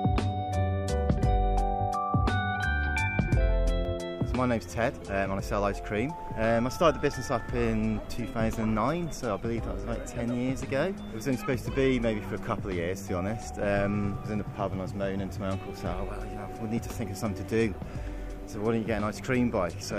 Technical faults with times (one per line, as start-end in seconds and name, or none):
none